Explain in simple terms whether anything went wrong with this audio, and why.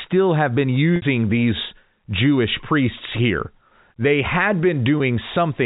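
Packet loss with pitch repetition occurs twice: 0.96 to 1.02 s (60 ms) and 4.98 to 5.00 s (20 ms). Chunks of speech went missing, and the receiver filled each gap by repeating the last vocal cycle, so the sound briefly holds a buzzy tone.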